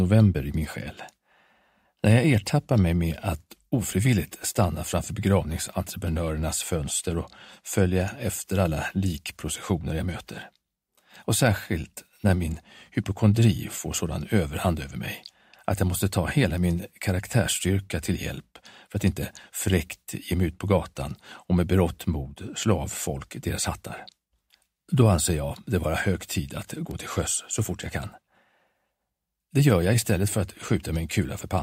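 Two bit error spikes break into the sound, at 16.58 s (about -22 dBFS) and 26.91 s (about -16 dBFS). Each is a single sample jolted by a flipped bit, heard as one bare broadband tick. Unlike a dropout click, no audio goes missing around it.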